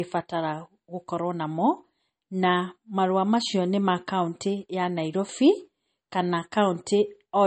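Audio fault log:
throughout: low-bitrate audio saved at a high bitrate. The speech was likely squeezed through a low-rate MP3 encode, in the region of 32 kbit/s, and later re-saved as MP3 at a generous rate near 200 kbit/s. That first pass threw away the top of the spectrum, leaving nothing above about 8.4 kHz, so sibilants sound dull. The second encode adds nothing that returns the missing air or detail.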